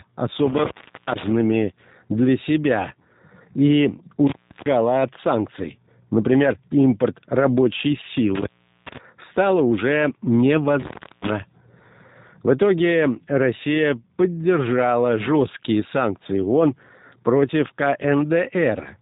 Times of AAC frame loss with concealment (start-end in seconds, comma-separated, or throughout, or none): none